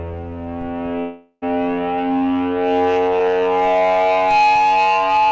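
At 1.00 s the music breaks off, and for the next 0.4 s or so you get a buzzy smear of the last sound fading away, then about 40 ms of silence before the music picks up at 1.44 s, further along. That's likely a long network dropout, with the receiver papering over roughly 420 ms of lost audio. Throughout, there's nothing above 8 kHz, which fits a G.722 call path at 64 kbps.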